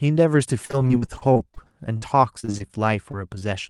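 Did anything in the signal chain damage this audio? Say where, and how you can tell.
Yes, the network stage damaged it. From 0.65 to 1.58 s and again from 2.40 to 2.71 s the speech turns choppy and robotic. This is repeated packet loss: eleven holes, then five, each up to about 40 ms, patched by stretching the preceding sound, so a quarter to a third of each stretch is synthetic.

At 1.97 to 2.04 s there is a burst of packet loss. About 40 ms of audio never arrived. The receiver held the last sound for roughly 46 ms as a fading buzz or hiss, then jumped ahead, so the material in between is simply gone.

Short concealed packet loss leaves brief smears or wobbles at 3.11 to 3.15 s, 3.35 to 3.38 s and 3.40 to 3.43 s. Each drops about 20 ms, which fits single lost packets. The Opus decoder bridges each hole by continuing the preceding sound before blending back in.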